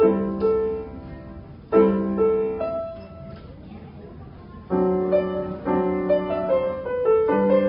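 No technical faults can be heard anywhere in the audio; the signal stays continuous and stable throughout.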